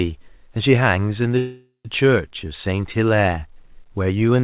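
At 1.38 s the sound stops advancing and a call audio freeze begins, lasting until 1.87 s. For nearly half a second, the last fragment is stretched into a fading buzz, ending in about 120 ms of silence before the audio resumes exactly where it left off, now running roughly 466 ms late. The likely cause is packets held up in transit, draining the jitter buffer. A spectrogram shows smeared, repeating bands decaying into a blank column, all below the 4 kHz ceiling of this G.711 A-law call path.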